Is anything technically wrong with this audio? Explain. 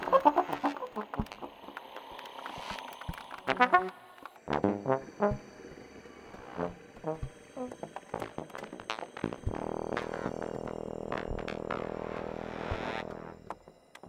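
Yes. From 0 to 4.36 s there is a section at the wrong speed. The audio runs 1.65 times faster than recorded, likely from playback or editing against the wrong clock. Because speed and pitch shift together, the sound is hurried and about ten semitones high.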